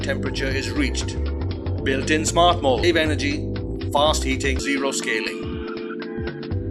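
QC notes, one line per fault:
2.83–2.86 s and 4.59–4.62 s, damaged data in a compressed stream: two short glitches, each about 30 ms long. Corrupted bytes in the compressed stream made the decoder misread those frames and lose sync, so it produced garbled output until it locked onto the next valid frame header.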